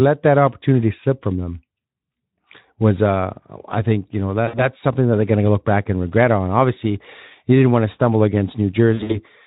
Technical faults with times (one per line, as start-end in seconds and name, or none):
4.47-4.67 VoIP packet loss concealed by the speech codec
8.93-9.20 VoIP packet loss concealed by the speech codec